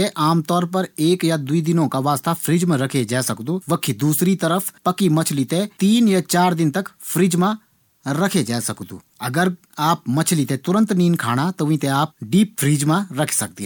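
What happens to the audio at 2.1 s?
Nothing goes wrong at 2.1 s: the speech there runs on intact, with no dropout, click, distortion or other technical fault.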